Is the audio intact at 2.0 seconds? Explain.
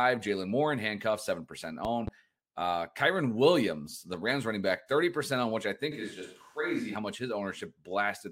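No. From 1.85 to 2.10 s a loud pop occurs: two sharp pops, roughly 10 dB above the speech, which continues underneath. The likely cause is a sudden voltage step or pulse, such as a switch or static discharge, entering the signal chain.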